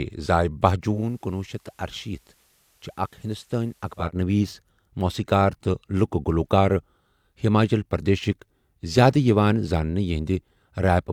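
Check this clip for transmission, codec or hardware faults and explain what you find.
One fault is present. From 0.88 to 4.12 s there is digital radio blending to analogue. The receiver lost its digital stream and cross-faded over 155 ms to the station's FM broadcast. Faint hiss rises beneath the speech, and the level falls about 6 dB. A smooth fade into hiss, rather than silence or a hard gap, separates this from a digital dropout.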